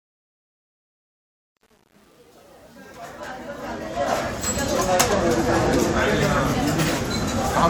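From 0.0 to 4.62 s, the fade-in shows truncation distortion. The gain stage drops low-order bits without dither, which fits roughly 9-bit resolution. Quiet samples collapse into coarse square steps. Until 3.98 s the sound is gritty, before the level rises.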